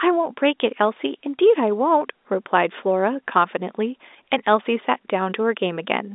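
No faults are audible: the speech sits in the ordinary telephone band of roughly 250 Hz to 3.7 kHz with nothing above 3.8 kHz, as expected of G.711 A-law coding, whose quantisation noise is at most faint.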